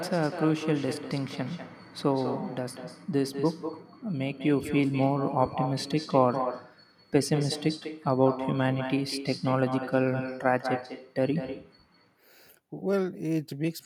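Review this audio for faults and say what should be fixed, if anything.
Echo with no canceller, throughout the speech: every phrase is followed about a fifth of a second later by a thinner copy about 9 dB quieter. The far end's loudspeaker feeds its microphone, and nothing subtracts that returning signal before it travels back. Enabling acoustic echo cancellation at the far end, or having that side use a headset, would prevent it.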